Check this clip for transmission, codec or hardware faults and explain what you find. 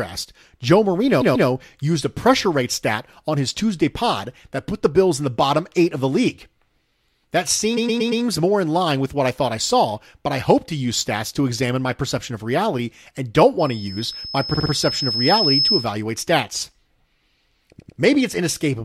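Two kinds of fault are present: repeated frames and a loudspeaker feedback squeal.

Repeated frames occur at 1.20–1.48 s, just before "used a pressure rate", and at 7.76–8.23 s, just before "more in line with". They recur at 14.53–14.70 s and 17.78–17.98 s. A block of compressed frames was delivered more than once, so the decoder replays it. The replayed blocks last about 139, 116, 48 and 99 ms, repeated 2, 4, 3 and 2 extra times. Each is heard as a stutter.

A loudspeaker feedback squeal runs from 13.59 to 15.92 s, starting after "of reality and don't". A microphone is picking up its own loudspeaker, and the loop gain exceeds one at 5.2 kHz. That tone swells over about two seconds into a squeal roughly 5 dB above the speech.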